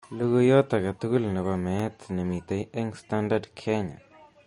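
From the start, the speech has likely been squeezed through MP3 compression at a bitrate low enough to fit around 40 kbps. Short of bits, the encoder discards everything above 10.6 kHz and drops weaker frequency lines that then flicker in and out between frames. The result is plainly audible: a dull top end, a watery, swirling texture, metallic chirping on s sounds, and consonant onsets that smear rather than strike cleanly.

Between 1.56 and 2.27 s come CD scratch ticks. A blemish on the disc wipes out more data than the player's error correction can rebuild, once per rotation, so the player patches or mutes the damaged samples. Four brief ticks result, spaced at a regular rotation-like interval across that span, each a tiny click or gap of roughly 2 ms at most, of uneven strength.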